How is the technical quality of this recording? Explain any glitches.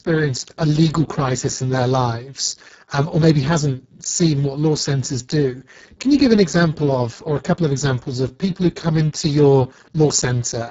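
Poor: Speex codec damage runs through the whole recording, from start to finish. Starved CELP excitation leaves speech hoarse and noisy, fitting roughly 6 kbps, with a noise-like upper band cut off at 7.7 kHz.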